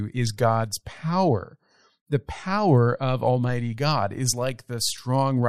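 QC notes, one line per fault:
No faults heard.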